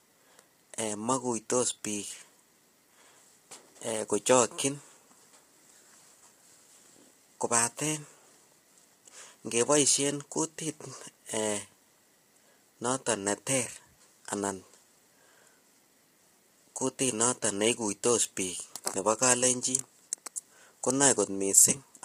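Throughout the speech, voices sound rough and grainy, with noise filling the gaps between harmonics and a dull, synthetic top band. This is likely heavy low-delay AAC compression: short frames resolve pitch harmonics poorly, and the damage fits a bitrate near 24 kbps.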